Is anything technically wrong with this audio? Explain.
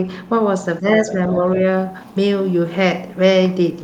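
Yes. The speech shows speech suppressed in double talk at two points: 0.80 to 0.87 s, where the level dips by about 10 dB, and 1.06 to 1.40 s, where it falls by a milder amount, about 5 dB, over part of that span. The likely cause is an echo canceller that could not tell the near talker from loudspeaker echo while both sides spoke, so it attenuated everything, leaving the voice ducked.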